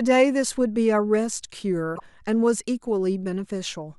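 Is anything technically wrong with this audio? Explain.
Yes. From 1.92 to 2.00 s the speech is interrupted by a brief glitch lasting about 80 ms. This is damaged data in a compressed stream: bytes in that part of the encoded file were lost, zeroed or overwritten, so the decoder misread the affected frames, lost its place in the stream and had to hunt for the next valid frame header. That search produces the brief disruption before normal playback resumes.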